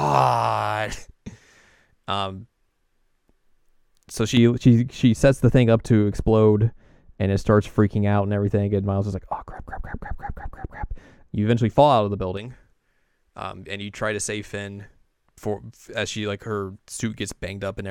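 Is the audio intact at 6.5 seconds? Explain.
No. At 6.5 seconds the speech sits inside a stretch of de-emphasis applied wrongly, from 4.37 to 12.37 s. A treble cut meant to reverse pre-emphasis was applied where none existed. Highs roll off smoothly, about 11 dB down at 10 kHz. It sounds dull and muffled.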